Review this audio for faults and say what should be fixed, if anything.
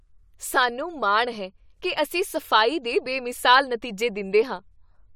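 No faults are audible; nothing needs fixing.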